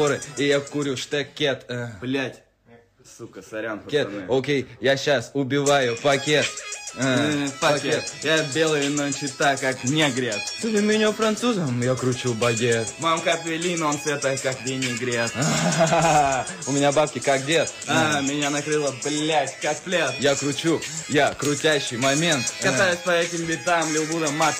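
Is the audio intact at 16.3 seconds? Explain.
Yes, at 16.3 seconds the audio plays through cleanly, with no dropout, click, distortion or other fault at that moment.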